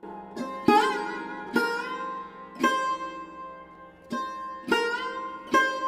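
No technical faults can be heard anywhere in the audio; the signal stays continuous and steady throughout.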